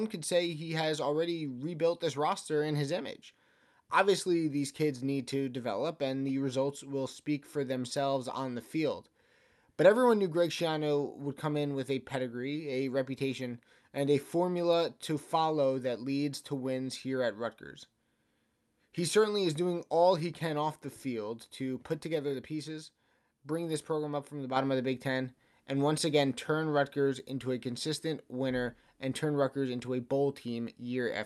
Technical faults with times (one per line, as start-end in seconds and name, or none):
none